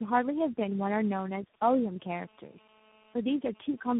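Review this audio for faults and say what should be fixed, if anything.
Tandem speech coding runs throughout. The speech is rough, muffled and warbly, with nothing above 3.8 kHz. That fits about four speech codecs in a row, each re-coding the last one's damage. Keep one codec end to end, or pass the coded stream through unchanged between networks.

GSM signalling bursts appear from 0.60 to 1.56 s. Faint short buzzes at about 217 Hz gallop in groups as the audio circuit rectifies a nearby phone's radio bursts. Keep phones away from the equipment and cables, and use shielded, filtered audio inputs.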